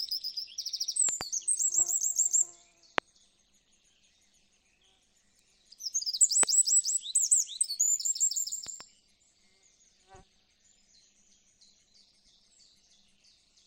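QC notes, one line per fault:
Throughout: overlap-add ripple. The level swells and dips by about 11 dB, repeating at around 200 times a second. The result is a metallic buzz with extra tones around each note, riding on the whole sound. It comes from framing. The audio was split into windowed frames and rejoined with overlaps whose gains do not sum evenly. Every frame boundary therefore leaves a dip or bump in level.
1.09–1.23 s, 2.98–3.00 s, 6.43–6.45 s, 8.67–8.83 s: loud pop. Sharp clicks jump out above the sound, which continues underneath. The first and last events are double pops. The middle two are single. Peaks sit roughly 10 to 25 dB over the surrounding level. The strongest is at 2.98 s, about 25 dB up. The weakest is at 8.67 s, about 10 dB up. The likely cause is a sudden voltage step, such as from a switch, static or a driver glitch. Later circuitry shapes it into a short thump.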